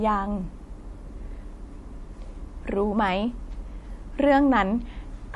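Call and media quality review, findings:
MP3 compression, likely, across the whole speech clip. Top end gone above about 11.4 kHz, watery swirl and smeared attacks plainly audible. Sounds like a low bitrate, around 48 kbps, starving the encoder so weak frequency lines drop in and out frame to frame.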